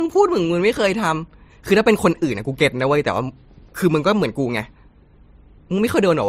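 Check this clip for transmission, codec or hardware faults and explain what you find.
One codec fault runs through the whole speech clip. Smeared, swirly artefacts from two codecs overlap, with nothing above 15.8 kHz. This points to likely transcoding between lossy codecs, a low-rate MP3 re-encoded to Opus, each stage adding damage.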